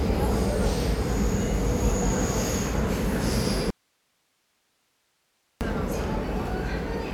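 The signal path likely lost its input briefly while the chain after the break stayed live: an audio dropout to a faint residue from 3.70 to 5.61 s. For about 1.9 s the sound cuts abruptly to hiss, roughly 45 dB below normal level, then returns just as suddenly.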